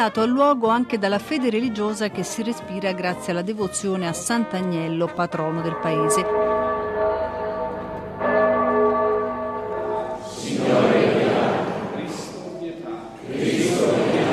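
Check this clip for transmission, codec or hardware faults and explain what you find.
Nothing stood out on listening that would point to a problem with the transmission, the coding or the hardware.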